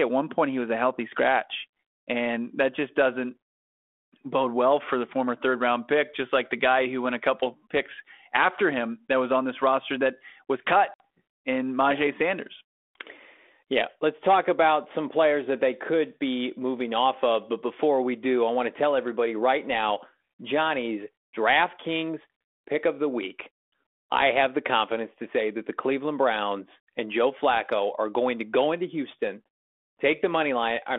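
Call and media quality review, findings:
Packet loss on an ADPCM call, 10.94 to 11.00 s. Hard-edged silent gap, about 60 ms, several packets dropped. On resumption, decoder's adaptive predictor and step size out of sync with sender: some distortion, settling within tens of milliseconds. Component: G.726 32 kbit/s path, band-limited to about 250 Hz to 3.5 kHz.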